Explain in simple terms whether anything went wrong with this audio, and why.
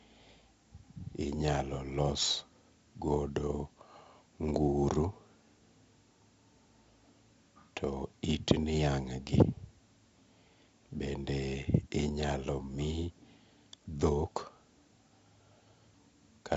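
Something did go wrong. All the way through, the speech has a gritty, sandy hiss that rides along with the voice, getting louder whenever the voice does, and sharp sounds come out rough and distorted. It also sounds dull, with nothing above about 7.7 kHz. The cause is 4-bit ADPCM compression, which saves space by recording only small guessed steps between moments of sound. Here the damage is heavy, and the missing top end suggests a low sample rate.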